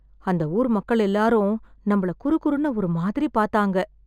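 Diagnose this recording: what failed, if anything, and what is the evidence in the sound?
The failure is in sample-rate conversion, specifically imaging from linear upsampling, and it runs through the whole speech clip. The top end sounds dull, and there's a faint metallic shimmer riding on the sibilants. That points to a source at roughly 11 kHz being raised to 48 kHz by straight-line interpolation between samples. The first mirror image of the spectrum sits between about 5.5 kHz and 11 kHz, roughly 40 dB down, because the interpolation filter is too weak to remove it.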